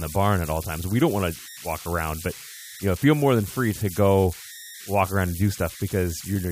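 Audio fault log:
Throughout, converter idle tones: a whistle around 2 kHz sits in the pauses and grainy noise rides under quieter speech, about 17 dB below it. Without dither, a delta-sigma converter fed small input falls into repeating bit patterns that sound at an offset-dependent pitch.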